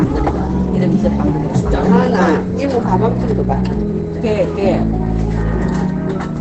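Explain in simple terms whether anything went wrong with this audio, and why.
Throughout, the sound is muffled and hoarse with nothing above 8.8 kHz, likely heavy Opus compression squeezing it into its narrower speech mode.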